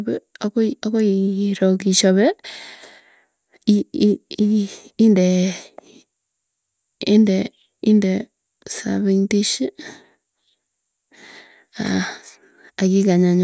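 No technical faults are audible anywhere in this recording.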